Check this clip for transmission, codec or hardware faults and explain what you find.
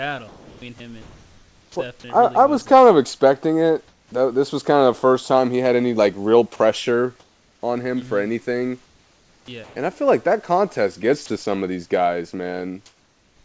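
Yes, the speech has several voice-detector faults, all heard against room noise about 41 dB below the speech, and the audio stops at 8 kHz as a wideband call codec would.

From 0.28 to 2.04 s, 8.86 to 9.76 s (after "for anything"), and 11.26 to 11.46 s (between "like that contest gets" and "of these guys"), the sound is choppy, with holes filled by synthetic noise. This is sound chopped by the voice detector, likely because it repeatedly stopped and resumed sending.

From 3.88 to 4.12 s, the real background is replaced by flat, featureless hiss about 6 dB quieter. This is comfort noise in place of the background, likely generated by the receiver while the sender paused transmission.

From 4.09 to 4.12 s, between "kind of expecting it" and "was kind of the", the speech starts abruptly, missing its first 30 ms. This is an onset clipped by the voice detector, likely from the detector being slow to notice the restart.

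From 6.56 to 6.60 s, a 40 ms piece of speech gives way to steady noise. This is sound dropped by the voice detector, likely from the detector mistaking speech for background.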